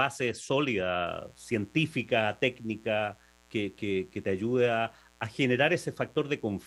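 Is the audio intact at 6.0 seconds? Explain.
No. At 6.0 seconds the speech sits under a mains buzz that starts at 1.06 s and lasts to the end of the clip at 6.66 s. It is a steady, raspy buzz, well below the speech, around 35 dB down. Sharp switching spikes from something like a dimmer or rectifier leak into the signal twice per 60 Hz cycle. That builds a dense stack of 60 Hz harmonics reaching up into the kilohertz range.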